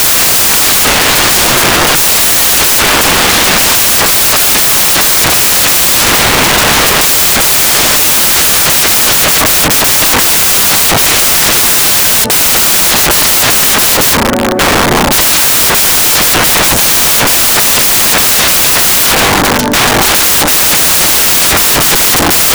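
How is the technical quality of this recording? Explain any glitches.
Poor: loud, harsh broadband noise fills the whole recording, close to white on louder sounds. Throughout, samples are built from the wrong bytes: the reader misorders or misaligns each sample's bytes, so the rapidly changing low bits land in the most significant position and swamp the signal.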